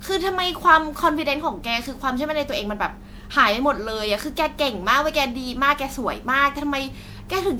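Throughout the speech, the audio sounds swirly, hollow and smeared, with blurred consonant attacks, likely generation loss from around seven successive MP3 passes at about 128 kbit/s.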